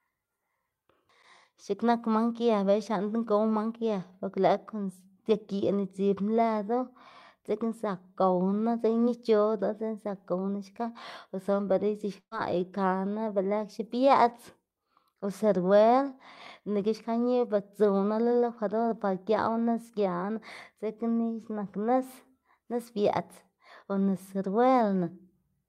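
Just after "xka o suna bela", from 12.19 to 12.34 s, the speech smears into a brief held tone that fades toward silence before resuming at "ikaná be lëxe". This is a burst of packet loss. Several consecutive packets never arrived in time, so the receiver stretched the last received sound for about 120 ms while lowering its level, leaving a short silent stretch, and roughly 120 ms of the original speech is simply gone.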